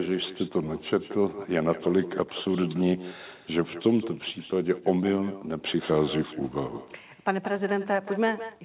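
Echo with no canceller runs throughout the speech. The far end plays the call through a loudspeaker, its microphone picks that sound up again, and nothing removes it. Each phrase returns about a fifth of a second later as a copy about 14 dB quieter. Nothing above 4 kHz comes through, which fits a G.711 mu-law narrowband call path.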